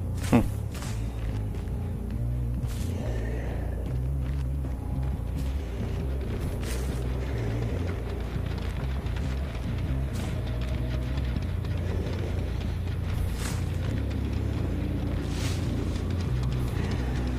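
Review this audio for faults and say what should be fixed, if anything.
No faults turn up in this audio, so nothing needs to be fixed.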